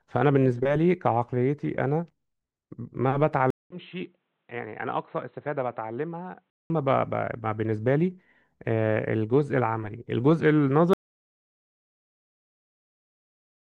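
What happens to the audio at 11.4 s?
At 11.4 s the speech is gone. An audio dropout to silence begins at 10.93 s and runs to the end of the clip. The sound cuts off abruptly mid-flow. What follows is silence, with no room tone or hiss beneath it. The likely cause is a lost input, such as a disconnected device, a failed link or a stray mute, while recording carried on writing silence. Anything spoken after the cut is lost.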